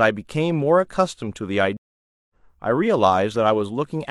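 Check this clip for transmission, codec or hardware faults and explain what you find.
There's one fault here, a stream reconnect in the speech between 1.77 and 2.34 s. The audio drops out for about 0.53 s, and when it comes back it has skipped ahead by roughly 0.4 s, so a short stretch of speech is simply gone. That's the connection breaking, the player going quiet while it reconnects, then spinning up a fresh decoder and joining the live stream wherever it has got to.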